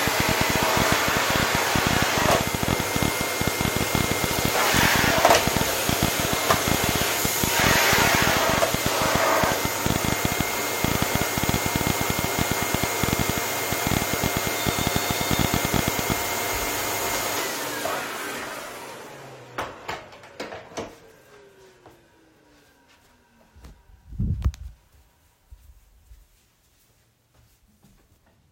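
From 0.08 s to 16.13 s, a train of clicks ticks and pops over the sound, about 12.5 per second at an uneven pace, some two hundred in all, peaking about 20 dB above it. Near-identical pulses point to likely interference or a faulty connection or power supply.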